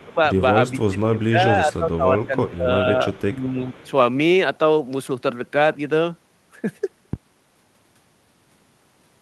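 From 0.0 to 0.15 s a faint delayed copy of the speech sits about 35 dB below it. The same copy returns at 1.18 to 1.25 s, 3.13 to 3.23 s and 3.73 to 3.91 s, about 30 dB down. Each time it trails by 388 ms. This is likely an echo leak: a far-end loudspeaker fed its microphone, and the echo canceller let part of that pickup back.

The speech also sags in level. From 0.0 to 0.19 s it drops by up to roughly 20 dB. Across 0.72 to 2.86 s it loses up to about 15 dB, for around one and a half seconds in total. At 3.31 to 3.75 s it dips a few dB. This is speech suppressed in double talk. It is likely caused by an echo canceller that could not tell the talker from the echo during overlap, so it turned both down.

At 7.13 s a deep thump lands and dies away within 35 ms. This is a phantom power thump. A supply switched on or off on a live input, and the voltage step pushed through the coupling capacitors as a low-frequency pulse.

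Over all of this lies the coding noise of the call codec, with the highs rolled off at 12 kHz.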